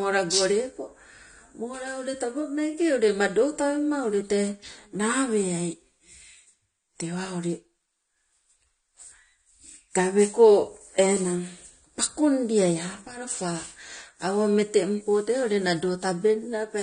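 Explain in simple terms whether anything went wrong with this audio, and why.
Yes, the whole recording sounds dull and a bit smeared, with nothing above about 9.7 kHz, and there's an obvious fizzy, warbly edge on the speech. That points to heavy AAC compression, most likely squeezed hard enough that the encoder dropped fine detail.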